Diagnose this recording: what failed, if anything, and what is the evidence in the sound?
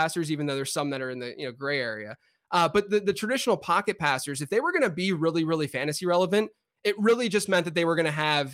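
Nothing failed: the speech shows no audible defect at any stage of the chain, so there is no fault to diagnose.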